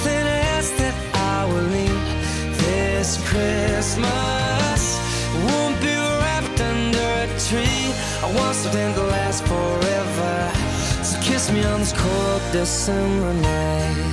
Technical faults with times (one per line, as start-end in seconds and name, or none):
10.60-14.13 resampler restarted on every block